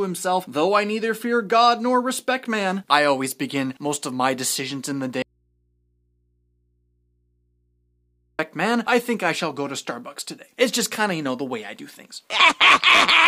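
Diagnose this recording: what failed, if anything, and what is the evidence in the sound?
At 5.22 s the sound cuts out abruptly and returns at 8.39 s, leaving about 3.2 s of mains hum some 45 dB below the signal. This audio dropout to a faint residue likely comes from a broken analogue connection, leaving the downstream input live but open.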